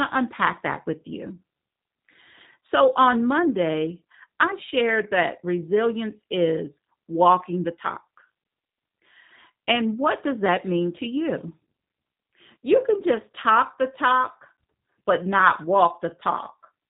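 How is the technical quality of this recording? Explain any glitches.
The quality is limited by plainly audible low-bitrate voice coding. The G.729 codec artefacts run through the whole speech clip. Nothing above about 3.8 kHz survives, so the sound is narrow and muffled. The codec rebuilds each short frame from a vocal tract model, a pitch predictor and a few pulses. That leaves a slightly rough, synthetic texture, which fits G.729A at 8 kbit/s.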